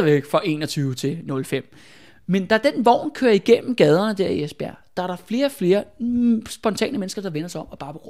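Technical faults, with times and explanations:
No technical faults are heard in this clip.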